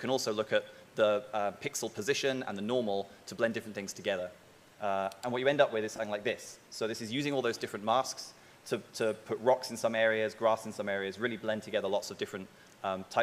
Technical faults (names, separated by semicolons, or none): lost LE Audio frames